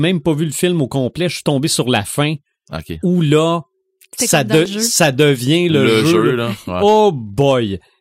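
Overlap between stream segments: where the timestamps of 2-second segments collide, the player drops about 22–24 ms. This causes skips after "là ça" at 4.66–4.68 s, and again at 6.66–6.69 s.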